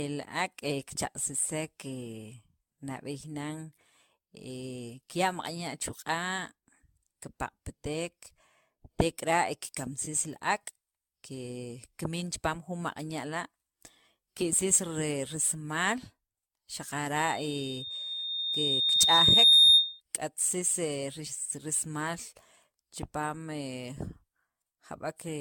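A speech recording runs throughout with a swirly, smeared and hollow character, blurred consonant attacks, and no content above 17 kHz. That is more degradation than a single lossy encode at that bandwidth would produce, and it is likely generation loss: repeated decoding and re-encoding, around fifteen passes, consistent with an AAC-LC chain at about 96 kbit/s. Each pass quantises on a shifted frame grid, so noise and spectral holes accumulate. From 17.16 s to 20.01 s a loudspeaker feedback squeal appears. A single 3.7 kHz tone swells over roughly two seconds to about 15 dB above the speech, then stops. It arises when a microphone picks up the loudspeaker it feeds and the loop gain at that frequency exceeds unity, so the tone grows on its own until the loop is broken.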